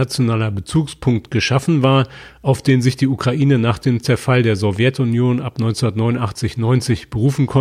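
Speech recording, with no technical faults to be heard anywhere in it.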